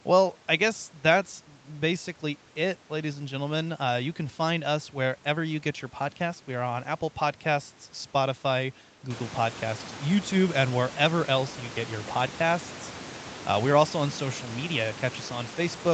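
Nothing stood out on listening to this speech as a technical fault in the recording or its transmission.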